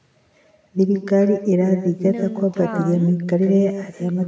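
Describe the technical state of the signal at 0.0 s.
At 0.0 s the speech carries an echo with no canceller, present throughout. A far-end loudspeaker feeds back into its microphone. A thinner copy trails roughly 150 ms behind, about 9 dB quieter.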